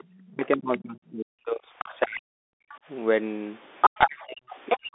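Bluetooth CVSD headset codec, throughout: the sound is squeezed into a narrow telephone band with nothing above 3.8 kHz, and a plainly audible granular hiss and scratchy sibilance fit 64 kbit/s CVSD.

Other side's voice leaking through, 0.0 to 1.11 s, 1.78 to 2.2 s, 2.7 to 2.78 s and 3.81 to 4.78 s: a second voice sits underneath at about 20, 15 and 30 dB below the talker, then roughly level with it in the last stretch. Loudspeaker playback has likely escaped the echo canceller.

Speech suppressed in double talk, 0.27 to 2.65 s and 3.98 to 4.94 s: the talker's own voice dips, dropping by as much as about 40 dB for roughly two seconds and then most of a second. This is likely the canceller ducking both voices while they overlap.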